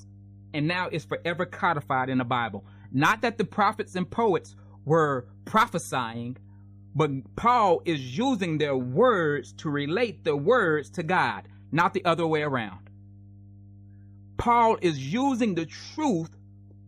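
A steady low drone sits beneath the speech for the whole clip, a constant tone at 50 Hz that stays well below the talker but never lets up, at about 25 dB under the signal. This is mains hum, where a ground loop or nearby transformer leaks the power-line frequency into the audio path.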